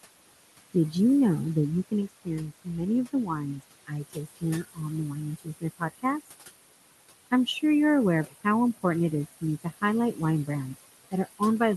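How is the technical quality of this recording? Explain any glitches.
The recording has clear processing problems, mostly from an aggressive noise suppressor working against room noise that sits only about 13 dB below the speech.

Noise suppressor artifacts run through the whole clip. The suppressor pulls the background down by about 19 dB frame by frame, so the noise dips between phrases and swells back under speech.

Speech cut by the noise suppressor happens at 1.88–2.89 s, 3.13–3.64 s, 3.87–4.44 s and 4.62–6.05 s. The suppressor mistook quieter speech for noise and dropped it by about 18 to 21 dB, so stretches of roughly 0.4 to 0.7 s in each window sound swallowed and faint.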